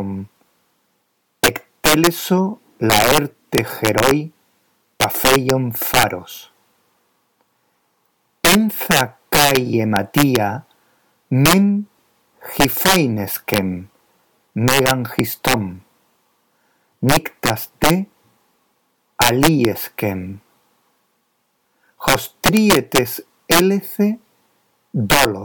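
Integer overflow runs throughout: about 10 dB of overdrive makes roughly one percent of samples wrap to the opposite sign, giving violent cracks far harsher than clipping's flattened buzz.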